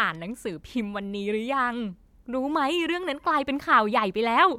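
No technical faults can be heard anywhere in the speech. There is nothing in it that needs a time marked or a repair.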